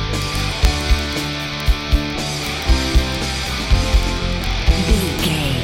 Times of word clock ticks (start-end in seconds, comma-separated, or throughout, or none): 0.10-5.64